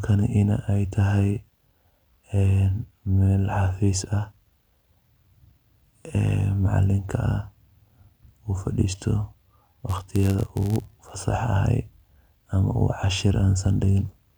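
From 9.86 to 11.15 s the speech picks up a steady buzz at 91.5 Hz, a rough, gritty texture laid under the voice, while the timbre stays the same. This is a block size mismatch (padded): one stage hands over blocks slightly shorter than the next stage expects, and the shortfall in each block is filled with silence. Those tiny gaps repeat at the block rate, producing the buzz, and stretch the speech to 0.996 of normal speed.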